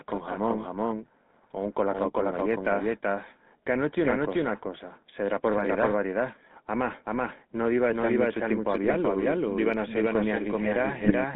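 A speech recording arrives through a GSM full-rate coder, and the sound points to the 13 kbps first-generation GSM standard. That coder rebuilds the voice from a vocal-tract filter driven by coarsely sampled pulse excitation, so the whole clip has a plainly audible buzzy, gravelly roughness. The line passes only about 150 Hz to 3.6 kHz, which leaves the speech thin and muffled, with no low warmth and no crisp sibilance. On top of that, the same audio is mixed in twice. This doubled audio track is likely the result of a second, slower capture path or an edit that left two copies out of step. The duplicate trails the original by roughly 0.4 s at about the same level, and it carries no decay or room colour, so every syllable is followed by a hard, full-band repeat that smears the speech into a stuttering overlap throughout. Two bursts of GSM bit errors then hit the decoder, at 8.84 to 8.95 s and again at 11.03 to 11.13 s. 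At error rates of roughly 1.7 and 1.8 percent, flipped bits corrupt the filter, pitch and gain parameters, and each burst fits about five damaged frames. The spectrum bends and the level jumps, so those two short stretches break into squawks, pops and gargling before the signal recovers.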